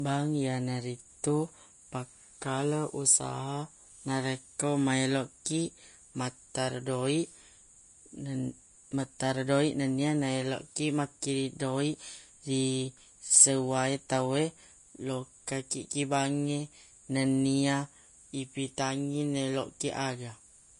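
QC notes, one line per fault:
throughout, Vorbis compression: The encoder was likely run at a low quality setting, with a grainy character that fits a bitrate near 33 kbps. It removes everything above 10.5 kHz and quantises the remaining upper band so coarsely that fine detail turns into noise of similar energy. The speech therefore sounds dull at the top yet hissy and gritty, with roughened sibilants, a granular texture over steady tones, and softened consonant attacks.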